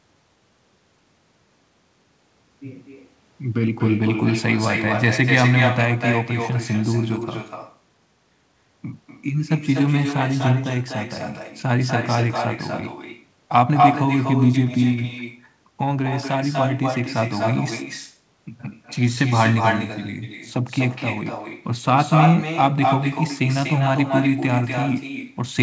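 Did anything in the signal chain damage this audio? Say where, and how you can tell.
Yes: echo with no canceller throughout, in call processing. A copy of the speech, about 7 dB quieter, returns about a fifth of a second later: loudspeaker pickup that nothing cancels.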